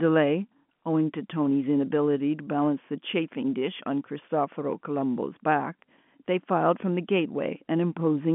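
No technical faults are audible.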